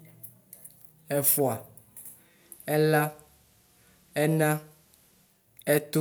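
At 2.19 s the speech goes into a digital radio blend to analogue: the receiver lost its digital stream and cross-faded over 286 ms to FM. A faint hiss sits well below the speech, and level drops about 1 dB, until it returns at 5.50 s.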